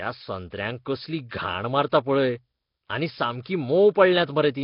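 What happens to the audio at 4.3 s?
At 4.3 s the speech sounds rough and hissy, smeared as if underwater, with nothing above 5.3 kHz, as it does throughout the clip. This is likely heavy Nellymoser compression: weak bands get no bits and are refilled with noise, consistent with roughly 22 kbps.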